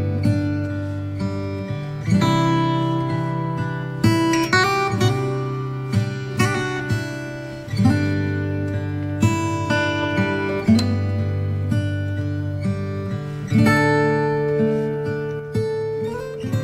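The audio carries a sudden gain jump at 15.40 s: the level drops by about 5 dB in a single step and stays there until the end of the clip at 16.63 s. The background noise falls by the same amount at the same instant, which points to a change in digital gain rather than anything in the source. The likely cause is a gain setting or bit shift applied abruptly, with no ramp to smooth the transition.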